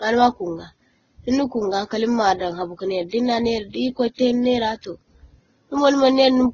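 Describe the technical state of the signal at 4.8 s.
At 4.8 s, as throughout the clip, the speech likely went through transcoding between lossy codecs, a low-rate Vorbis pass then Opus, leaving stacked artefacts and nothing above 7.8 kHz.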